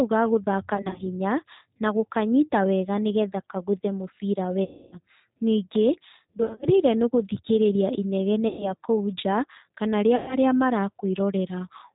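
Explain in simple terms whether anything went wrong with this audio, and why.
The whole recording passed through the G.729 codec, a low-rate phone codec that rebuilds speech from a simplified model of the voice. Nothing above 4 kHz survives, so the speech sounds muffled, slightly rough and synthetic from start to finish.

Five short gaps come from VoIP packet loss concealed by the speech codec: 0.75–1.03 s after "ga gũthaka", 4.64–4.97 s, 6.39–6.66 s before "nĩ gũthikĩrĩria", 8.48–8.72 s after it, and 10.16–10.37 s. The decoder fills the missing pieces with stretched guesses, a buzzy tone or a coloured noise that fades, and the voice stays weak briefly afterward.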